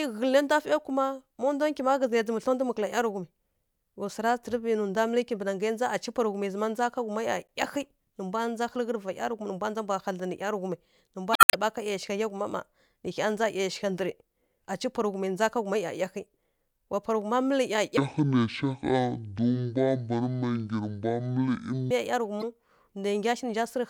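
At 7.49 s there's a tiny blip, the first sign of damaged data in a compressed stream: bad bytes make the decoder choke on a frame and resync. It happens again, longer, from 11.33 to 11.54 s as a squawky chirp. From 17.97 to 21.91 s you get a section at the wrong speed. The speech plays at about 0.53 times normal, so it drags and sinks roughly ten semitones, deep and slow. That's likely a player or editor running that stretch against the wrong clock. Right after, at 22.40 to 22.44 s, the stream corruption returns as another short blip.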